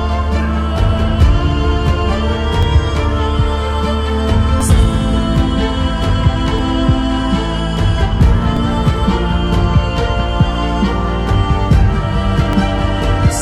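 Overlap between stream segments: 2-second segments with overlapping time stamps had 5 to 13 milliseconds trimmed, so the waveform jumps, giving tiny skips at 2.63, 4.61, 6.59, 8.57, 10.55 and 12.53 s.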